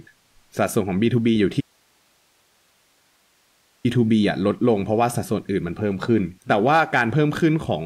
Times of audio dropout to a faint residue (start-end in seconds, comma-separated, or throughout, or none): 1.61-3.85